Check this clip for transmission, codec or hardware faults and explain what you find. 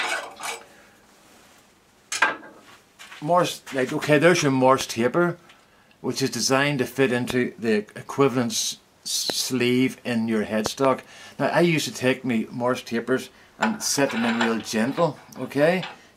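There are loud pops at 4.81 s, 7.30–7.32 s, 9.30–9.32 s and 10.66–10.87 s, the last being two pops in quick succession. Each is a sharp transient up to about 20 dB above the signal, with the sound continuing underneath. A voltage spike, likely from a plug, switch or static discharge, was added to the signal.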